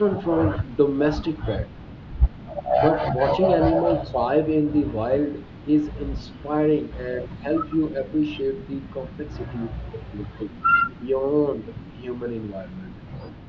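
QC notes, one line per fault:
The speech carries the ordinary signature of call microphone processing, with the lowest bass trimmed by its high-pass filter, and no faults are present.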